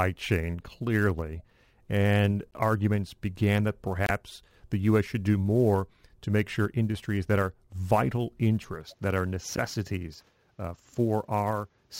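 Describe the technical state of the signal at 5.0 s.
Sample clock jitter affects the speech at 5.0 s, as it does throughout the clip. The converter's timing wanders by around ten microseconds, so each sample lands slightly off time. Steep, loud and bright passages pick up a gritty hiss roughly 25 dB below the signal, which falls away in pauses.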